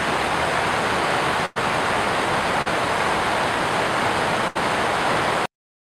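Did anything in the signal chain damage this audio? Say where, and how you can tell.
Yes, the network stage damaged it. A burst of packet loss appears at 1.45 to 1.58 s and again at 4.48 to 4.57 s. Each time the last sound is held and faded, buzz or hiss. About 100 ms and then 80 ms of audio never arrive. Playback resumes further on.

Short concealed packet loss occurs at 2.62 to 2.68 s. About 40 ms failed to reach the decoder in time. The receiver extended the preceding sound and blended back into the real audio. It comes across as a brief smear.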